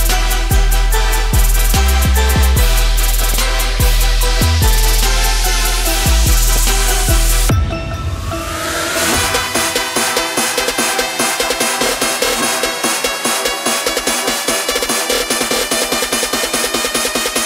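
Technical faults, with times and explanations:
3.18–3.37 s and 6.49–6.63 s: DAB burbling. Two brief bursts of burbling noise blips sit over the audio, the first slightly longer. Weak reception let bit errors slip past error correction into the MP2 stream. Corrupted samples put short blips of noise in single sub-bands.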